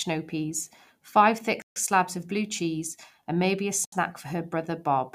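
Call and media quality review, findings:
Bluetooth stall, 1.62–1.76 s: speech drops to dead silence for 140 ms after "snow peas five thick", resumes at "slabs of blue cheese". Likely the wireless link: packets held up, headset buffer ran empty, playback waited for resends.

Same again at 3.85–3.92 s, shorter gap of 72 ms right after "cheese and maybe a". Clean cut to silence, picks back up.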